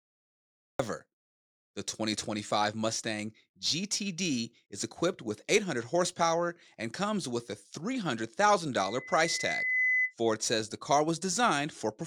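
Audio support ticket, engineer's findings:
Cut-off start. Digital silence from 0.00 to 0.79 s, then speech enters abruptly mid-sound at 0.79 s. No attack, no fade-in. Capture or stream began late. Component: recording start or stream connection, not the talker.

Loudspeaker feedback squeal, 8.78 to 10.14 s. Single tone at 2 kHz, swelling over about a second to roughly 5 dB above the speech. Mic hears its own loudspeaker. Loop gain exceeds unity at 2 kHz. Component: mic and speaker placement, monitor gain.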